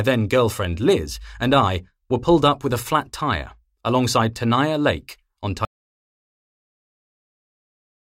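At 5.65 s the speech cuts off in mid-flow and the clip stays silent to the end, with no room tone. This is an audio dropout to silence, likely from a lost input while recording continued. The waveform flatlines and the spectrogram turns blank.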